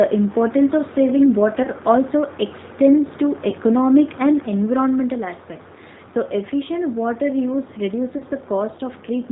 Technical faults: G.729 codec; VoIP packet loss concealed by the speech codec

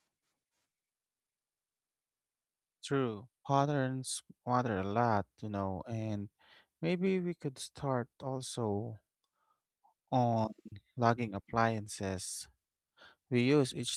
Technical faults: lost packet rebuilt from error correction

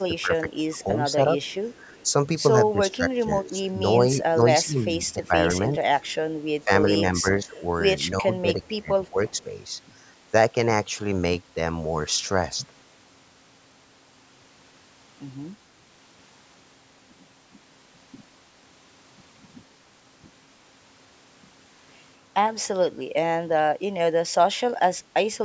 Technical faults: speech suppressed in double talk; echo leak

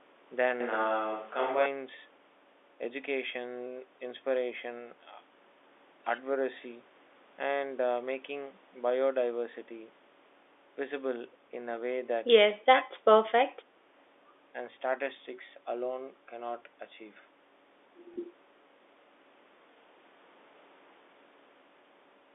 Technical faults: switch to a distant microphone; speech suppressed in double talk; packet loss with last packet repeated

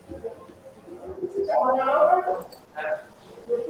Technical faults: call bitrate drop

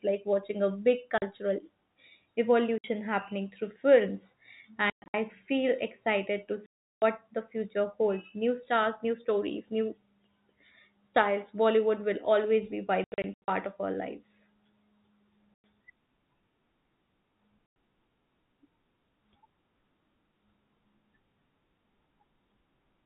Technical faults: packet loss filled with silence

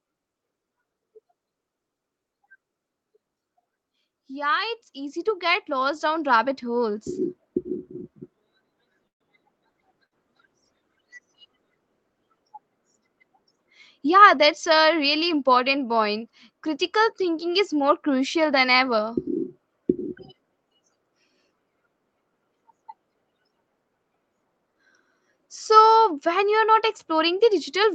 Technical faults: automatic gain rising; call audio freeze; call bitrate drop; burst of packet loss; jitter buffer speed-up

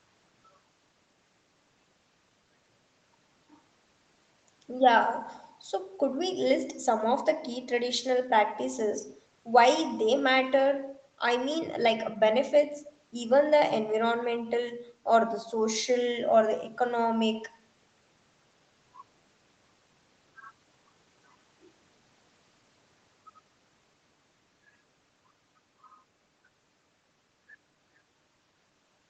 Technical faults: none

